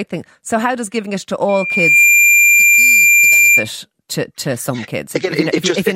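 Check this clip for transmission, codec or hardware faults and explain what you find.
One hardware-path fault is present, a loudspeaker feedback squeal. From 1.49 to 3.68 s, after "does giving it to" and ending before "to to some", the microphone picks up its own loudspeaker. The loop gain passes one at 2.4 kHz, so that tone swells over about half a second to roughly 10 dB above the speech. Unlike a steady mains hum or interference tone, it builds up by itself at a single frequency.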